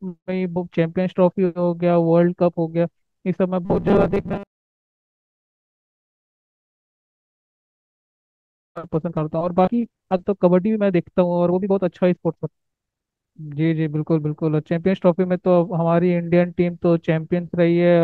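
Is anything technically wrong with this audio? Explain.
Yes. From 3.65 to 5.30 s, robotic sound from repeated short buffers turns the speech into a rigid metallic 200 Hz buzz. This is likely because audio arrives too seldom, so a 5 ms slice loops while about half the real signal is skipped. Unlike a stutter, no syllables audibly repeat; the loops fuse into a buzz.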